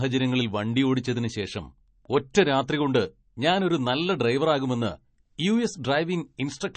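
Speech with MP3 compression damage throughout: nothing above 8.3 kHz, watery, swirly sibilants, likely from a low bitrate near 32 kbps; spectrograms show a flat ceiling and flickering high-band holes.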